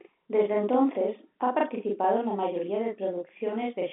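Throughout the clip, one channel runs about 40 ms behind the other, and the two are summed to mono. That channel delay (doubling) puts a second, equally loud copy of the speech just behind the first, heard as a tight slap or doubled voice over a telephone-band signal that tops out near 3.7 kHz.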